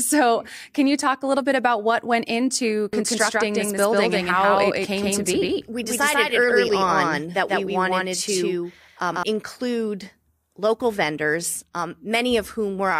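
From 2.93 to 9.23 s there's a doubled audio track: a same-level copy trails by roughly 150 ms, dry and abruptly switched, likely a second capture path.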